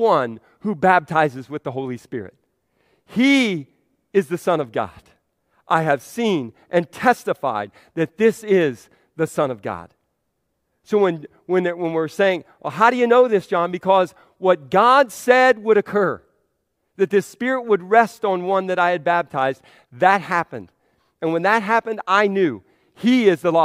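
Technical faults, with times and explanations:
No technical faults can be heard anywhere in the speech. There is nothing to list with a time or an explanation.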